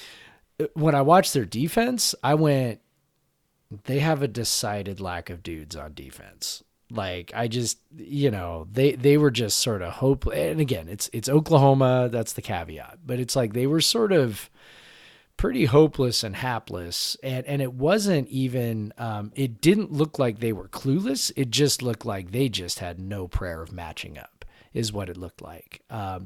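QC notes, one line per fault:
No faults heard anywhere in the speech.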